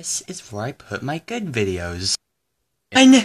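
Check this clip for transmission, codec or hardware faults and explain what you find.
One fault turns up near the end of the clip, at 2.95 s: damaged data in a compressed stream. A short run of the encoded data reaching the decoder was corrupt, so the frame there could not be read correctly. The decoder lost its place in the stream and had to hunt for the next valid frame header before it could resume normal decoding. In the sound, this comes through as a very brief blip or chirp, lasting under 20 ms.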